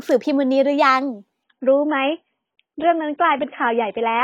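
At 1.44 s the adaptive stream drops to a lower bitrate until the end. The speech suddenly loses everything above 3.7 kHz and turns muffled and smeary, which fits a fall from 96 to 16 kbit/s AAC. A spectrogram shows the top band vanishing, while the waveform runs on without a gap.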